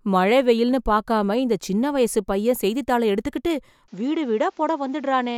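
Speech in which the input likely switched to a poorer device at 3.88 s, right after "வயசுப் பையன் செய்தித்தாள எடுத்துகிட்டு", with no gap at the changeover. From there to the end nothing passes above 7.6 kHz, so the sound turns duller, drops roughly 5 dB, and gains a faint new noise floor about 40 dB down.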